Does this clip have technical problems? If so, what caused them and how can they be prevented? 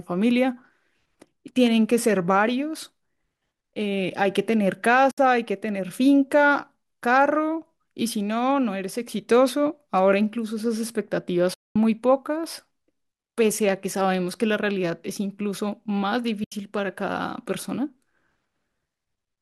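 Yes. AAC frame loss with muting: lost 10 ms frames were zeroed, so the sound fades into soft-edged gaps at 5.11, 11.54 to 11.76 and 16.44 seconds. Forward error correction or retransmission over the network link would prevent this.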